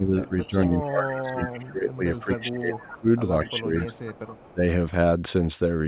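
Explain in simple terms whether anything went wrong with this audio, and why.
Two things went wrong, both typical of a speakerphone call where both ends talk at once.

Speech suppressed in double talk: from the start to 3.08 s the voice keeps sinking, for about two seconds in total, with some dips deep enough to nearly lose it. Shorter dips follow at 3.49 to 3.97 s and 4.53 to 4.61 s. This likely happens because the echo canceller, hearing both sides together, cannot tell the local talker from the returning echo and turns everything down.

Echo leak: a faint delayed copy of the voice, trailing it by about a quarter of a second (0.23 s), appears at 0.42 to 0.47 s, 0.81 to 0.9 s, 1.5 to 2.2 s, 2.75 to 2.97 s and 3.44 to 4.53 s. The last two are noticeably louder than the earlier scraps. The likely cause is that the far end's echo canceller did not fully remove what its microphone picked up from its loudspeaker, so part of it was sent back. 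The phone-style coding limits everything to below 4 kHz, which makes the echo sound thin and muffled like the rest of the call.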